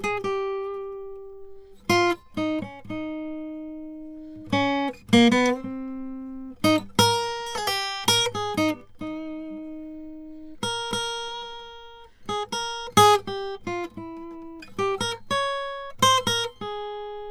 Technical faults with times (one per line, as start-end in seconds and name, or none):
none